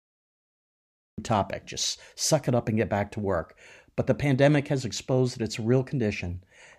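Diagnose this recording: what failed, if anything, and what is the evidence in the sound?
The clip opens on dead digital silence for the first 1.18 s, then the speech cuts in abruptly at 1.18 s, already in the middle of a sound and with no natural attack, just before "topic just suck it". This is a cut-off start: the recording or stream began after the talker was already speaking. The capture or buffering stage came online late, so the opening of the utterance was never written and the file jumps from nothing into active audio.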